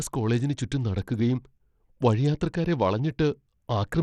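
The speech was likely squeezed through Bluetooth SBC compression at a starved bit pool, consistent with roughly 80 kbps, so the upper sub-bands get few bits throughout. The treble flickers and drops out, and a plainly audible gritty, aliased noise rides on the speech.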